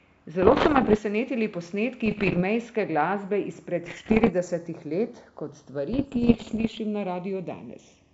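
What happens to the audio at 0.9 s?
Bit errors on an ADPCM link, running from 0.42 to 0.99 s at a bit error rate of roughly 2 percent, corrupt the decoder's step size and predictor. This produces pops, rough bursts and brief level jumps. Throughout, the two channels are drifting apart on clocks differing by roughly 50 ppm, so a slow flanging sweep is heard.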